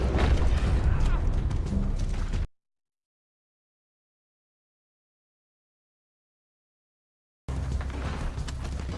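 No technical faults can be heard anywhere in the audio; the signal stays steady and intact throughout.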